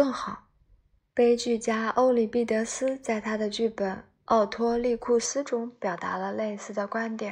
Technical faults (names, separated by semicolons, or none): input switched to a poorer device